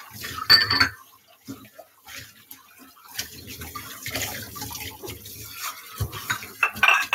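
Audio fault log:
throughout: noise suppressor applied to music or sounds, a speech-tuned suppressor treating steady content as noise, so levels swing by roughly 10 dB and sustains thin.
1.02–1.48 s, 1.67–2.08 s, 2.32–3.06 s: sound cut by the noise suppressor, sustained portions pulled down by about 10, 10 and 8 dB.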